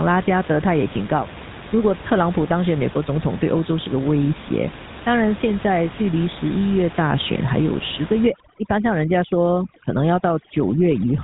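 From the start, the speech carries GSM full-rate codec damage: the vocal tract is modelled and driven by a thinned, regularly pulsed excitation, giving a plainly audible buzzy, gravelly grain, which fits a 13 kbps stream. Nothing passes above 3.8 kHz. A simple band limit would dull the sound without adding roughness.

From 8.27 s to the end, overdone noise removal takes hold. The room noise, about 16 dB below the speech, is pushed toward silence with twinkling specks, and quiet parts of the voice are gated away. Codec grit would not empty the background like this.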